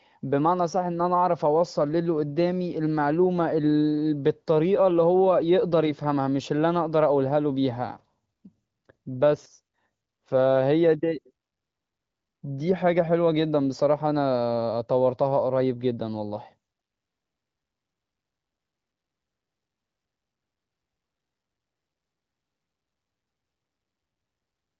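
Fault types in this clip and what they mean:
Listening through this speech over an AMR wideband (HD Voice) link, with content reaching up to about 7.6 kHz, nothing stood out as a fault.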